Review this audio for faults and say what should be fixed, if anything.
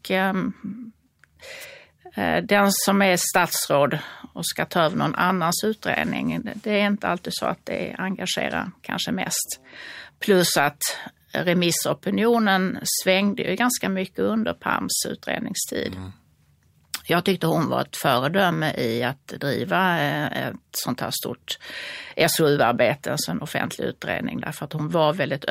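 At 1.60 to 1.65 s the speech has a wireless microphone noise hit, a short swish of static lasting about 50 ms as the analogue FM link fades and receiver noise surfaces. Fix it with diversity receivers, careful antenna placement and a clear line of sight.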